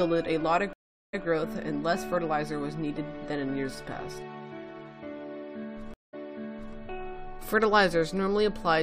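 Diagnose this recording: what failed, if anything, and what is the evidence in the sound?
Stream reconnect at 0.73 to 1.25 s and 5.94 to 6.76 s, a network fault. After gaps of 0.4 s and 0.19 s, a fresh decoder resumes 0.12 s and 0.63 s earlier, replaying audio.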